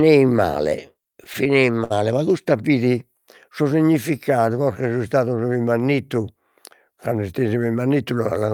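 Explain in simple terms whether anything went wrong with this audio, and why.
Between 0.93 and 1.92 s the speech has repeated stalls (stutter): nine brief pauses, each up to 60 ms, where the last sound was held while late audio caught up. It drags, though nothing is lost.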